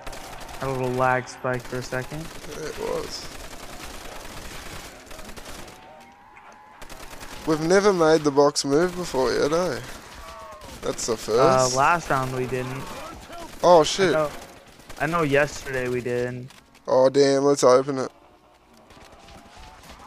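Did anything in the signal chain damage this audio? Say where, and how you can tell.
No, nothing in the signal chain damaged this audio that I can hear.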